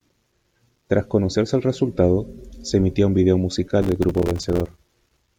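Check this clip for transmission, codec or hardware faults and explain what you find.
One fault is present. From 3.82 to 4.78 s, just after "se emitía un vídeo", a dense gritty crackle tears through the speech. This is processor overload crackle: dozens of very short buffers, each a few milliseconds long, miss their deadline and drop to silence, leaving hard-edged gaps.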